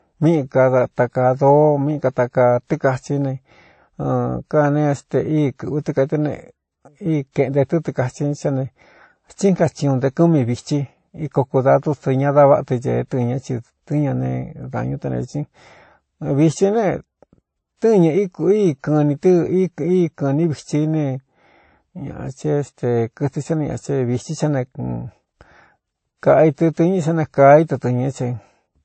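Throughout the speech the sound shows transcoding between lossy codecs, likely a low-rate MP3 encode (consistent with roughly 33 kbit/s) that was then re-encoded as WMA 1 (consistent with about 64 kbit/s). The second codec spends its bits reproducing the first codec's artefacts and adds its own, so both sets are heard together. The lowest cut-off in the chain remains, so nothing is left above 8.3 kHz. On a spectrogram this appears as a hard, flat ceiling at that frequency.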